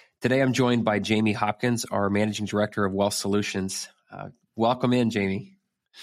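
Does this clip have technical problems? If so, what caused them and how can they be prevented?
No, there are no technical faults to be heard in this speech clip. There is nothing here whose cause needs tracing or that needs preventing.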